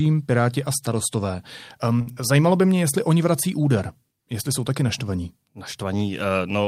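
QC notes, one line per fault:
2.01–2.22 s, short stall from a late packet: the buffer ran dry, so about 51 ms of sound is held and stretched before "by mě jestli oni", with nothing lost.
2.12–2.18 s, short concealed packet loss: 40 ms never arrived, so the receiver extended the preceding sound to fill the gap, leaving a brief smear inside the stall.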